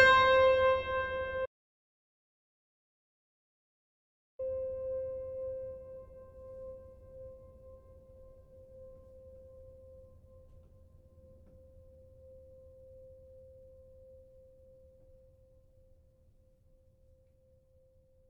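At 1.46 s the music cuts out abruptly. An audio dropout to silence follows, lasting until 4.39 s. That is about 2.93 s of silence, with no room tone. The input was likely lost while recording continued. The music resumes mid-flow.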